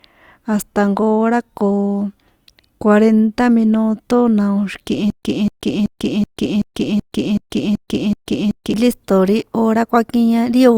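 From 5.10 s to 8.74 s the speech breaks into a stutter with silent gaps. A 249 ms fragment repeats nine times. Each repeat ends in 130 ms of digital silence, so the burst recurs every 379 ms. The player or stream likely stalled. The speech due in that stretch is lost.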